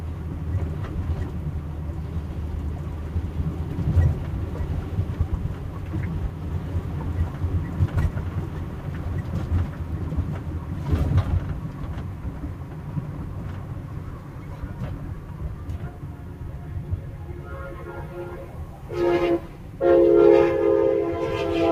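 A recording of sounds, processed throughout by a speech noise suppressor applied to non-speech sounds. Sustained components and room tails are treated as noise and pulled down by around 10 dB, so the level pumps and thins while onsets pass.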